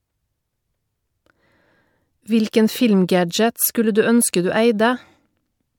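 No technical faults can be heard anywhere in the recording; the speech signal stays steady and intact throughout.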